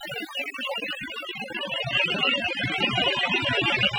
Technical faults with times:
0.00-3.98 overdone noise removal

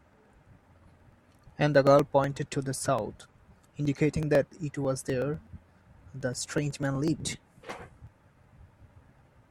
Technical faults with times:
0.13-9.43 periodic USB or driver dropouts

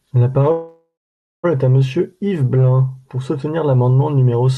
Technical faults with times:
0.51-1.45 call audio freeze

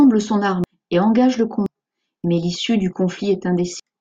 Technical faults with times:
0.64 compressed frames skipped
1.66 compressed frames skipped
3.80 compressed frames skipped

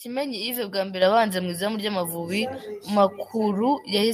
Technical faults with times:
1.02 microphone volume stepped up
2.04 microphone volume stepped up

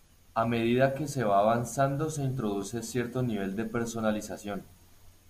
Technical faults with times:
none

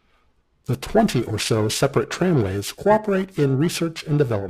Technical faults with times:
0.00-4.49 periodic clock jitter

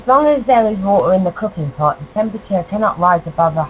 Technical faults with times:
none

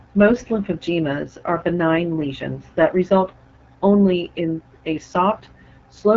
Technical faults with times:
0.00-6.16 AMR wideband (HD Voice) codec

